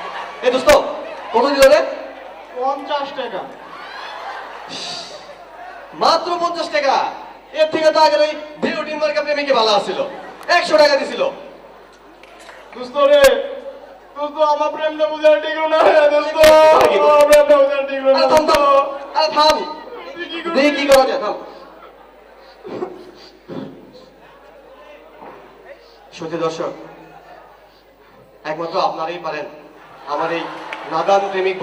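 No technical faults can be heard anywhere here.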